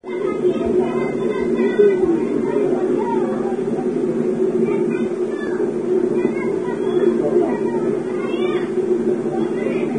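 Vorbis compression damage runs through the whole sound clip. Nothing is heard above 9.7 kHz, and the treble below that is coarse, hissy and grainy, with roughened tones and smeared attacks. The likely cause is heavy low-bitrate Vorbis encoding, consistent with roughly 23 kbps.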